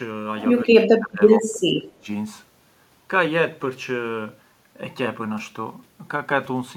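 From 0.64 to 1.22 s and again from 1.38 to 2.09 s, the speech drops by up to about 25 dB, showing as waveform troughs and thinned spectrogram bands: speech suppressed in double talk, likely an echo canceller mistaking this side's speech, overlapping far-end loudspeaker sound, for echo.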